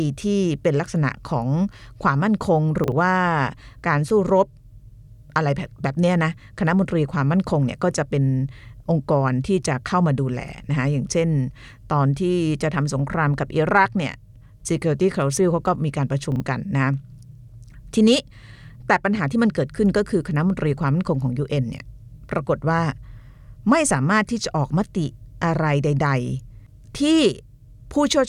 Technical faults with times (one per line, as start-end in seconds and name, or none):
2.84-2.92 chunks out of order
16.32-16.40 chunks out of order